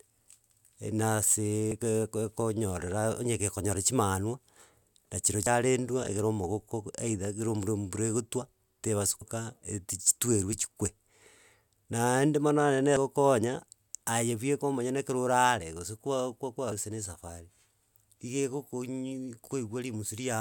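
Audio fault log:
1.72, 5.47, 9.22 and 12.97 s (the last just after "mono onye na"): audio missing between chunks. About a third of a second drops out and the speech jumps ahead, likely from 4 s chunk changeovers.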